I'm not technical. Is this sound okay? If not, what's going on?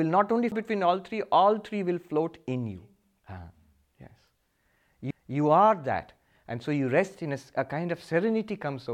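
No. Two CD skips, at 0.51 s after "not only" and at 5.11 s before "are that", each a tiny tick and split-second silence. Unlike a dropout, playback then jumps to a different point rather than continuing where it stopped.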